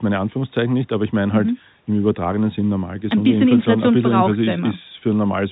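Nothing in the speech stood out as a fault on listening.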